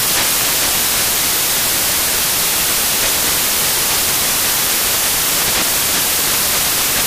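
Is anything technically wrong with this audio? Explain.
Yes. For the whole clip, samples are built from the wrong bytes: each value is assembled with its bytes misordered or misaligned, so the rapidly changing low bits dominate. The result is loud, harsh broadband noise throughout, unlike clipping or hum, which keep the underlying sound recognisable.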